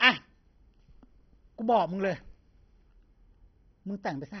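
Heavy MP2 compression is likely throughout, with starved sub-bands; it fits about 32 kbps. Nothing reaches above 6.1 kHz, and the dull speech carries gurgling, granular distortion.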